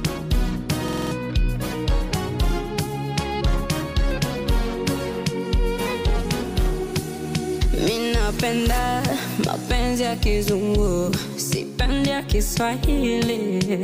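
From 0.88 to 1.12 s, a system hang loop: the computer froze while the hardware kept replaying one 46 ms fragment five times, a 21.5 Hz stutter that fits a 2048-sample buffer. The waveform shows identical repeated blocks, the spectrogram evenly spaced vertical stripes, and roughly 200 ms of audio is lost.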